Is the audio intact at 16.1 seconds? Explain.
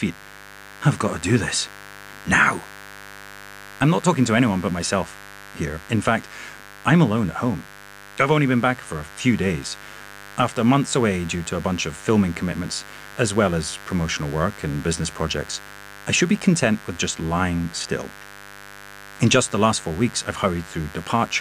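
No. At 16.1 seconds the speech carries mains buzz, and it runs through the whole clip rather than starting or stopping there. Sharp switching spikes, such as those from a dimmer, a rectifier or a missing shield, leak in twice in every 50 Hz cycle. That gives a 100 Hz pulse train with harmonics extending well into the kilohertz range. It sits roughly 20 dB below the speech. It sounds like a steady, raspy buzz under everything.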